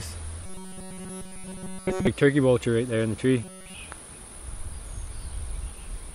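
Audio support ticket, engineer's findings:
Robotic sound from repeated short buffers, 0.46 to 2.07 s and again 3.44 to 3.74 s. Rigid metallic buzz at 188 Hz, the original sound almost entirely replaced by repeats. Likely buffer underrun, with a roughly 5.3 ms chunk looped, hence the pitch.

Loud pop, 3.92 to 3.94 s. Single sharp click sitting a few dB above the surrounding level, and the sound carries on underneath. Likely a driver glitch or switching transient dropping a short voltage spike into the path.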